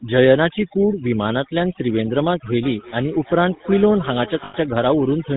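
A short speech clip carries two faults from start to finish. Overdone noise removal has pushed the background to near silence dotted with twinkling specks, and quiet parts of the voice drop out with it. That band-by-band gating separates it from simple low-pass dullness, which would not sparkle. On top of this, the GSM full-rate codec, at 13 kbps, is plainly audible: nothing passes above 4 kHz, and the sparse pulse excitation gives a buzzy, gravelly roughness rather than the smeared, swirly texture of modern low-bitrate codecs. From 2.63 to 4.74 s there is a feedback echo between two devices. A second device in the room plays what the first device's microphone sent, and that microphone picks it up again, so the sound returns roughly every 0.3 s, at most about 18 dB below the speech, thinner and more ringing each pass. A single room reflection would not repeat at that fixed interval. From 4.44 to 4.55 s, lost GSM frames hold the sound as a rough, metallic ring for about 100 ms, which fits five 20 ms frames repeated at falling level. 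That held tone sets it apart from a plain dropout to silence.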